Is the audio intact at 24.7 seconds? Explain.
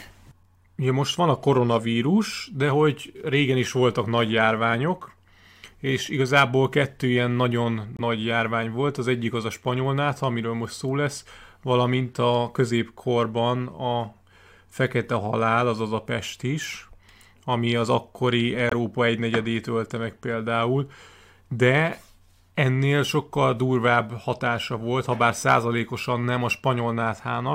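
Yes, at 24.7 seconds the speech plays through cleanly with no audible fault.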